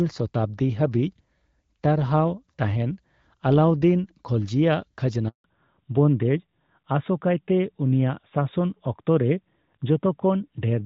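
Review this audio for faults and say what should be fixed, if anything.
A handover gap runs from 5.28 to 5.44 s, about 160 ms. The call moved between networks, and no speech frames arrived during the switch. The sound dies away within a few tens of milliseconds. Silence follows until the new link starts. To prevent it, configure make-before-break handover so the old link carries audio until the new one is ready.

From 5.44 s to the end, the call shows a fallback to narrowband. Before that point, the HD Voice path sounds clear, as expected at a mid-range wideband rate. Afterwards, nothing above 4 kHz remains. The sound turns duller and rougher, which fits a drop to an older narrowband codec such as AMR-NB. To prevent it, make sure the target network supports wideband codecs before handover.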